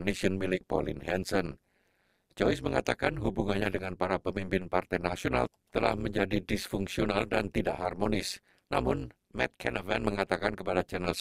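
Overlap-add ripple runs through the whole clip: frames were rejoined with overlapping windows whose gains don't sum evenly, so the level dips by about 60 dB once per frame, around 200 times a second. Unlike slow tremolo, this rate yields a harsh, robotic buzz-like roughness.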